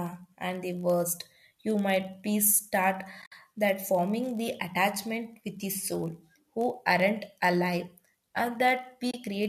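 Right from the start there's a low buzz sitting under the speech at about 46.9 Hz, and it runs the whole way through. That's a padded block size mismatch: one stage hands over blocks slightly shorter than the next stage reads, and the leftover space is filled with silence. The buzz rate fits reads of 1024 samples at 48 kHz. The shortfall is tiny, so the slowdown is only about 0.999x, and pitch sounds normal.

Then around 3.22 to 3.32 s you get AAC frame loss with muting. About 80 ms of audio is dropped across roughly 100 ms, mostly as one stretch of around 70 ms. The decoder zeroes the missing frames, and the overlapping windows fade the sound down and back up, so it's a soft-edged hole. The same thing happens again from 9.11 to 9.14 s, a shorter 30 ms gap with the same gentle fade. The light graininess on the speech is likely just the AAC-ELD codec at 64 kbps.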